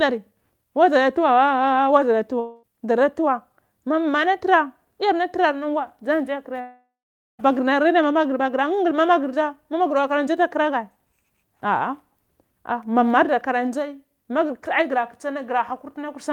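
Speech clip with two gaps, likely from a long network dropout. At 2.39–2.65 s a fading buzz covers about 0.24 s of lost sound. At 6.61–7.41 s the buzz decays into about 0.49 s of silence. On a spectrogram these show as smeared, blurred bands, the second trailing into blank columns.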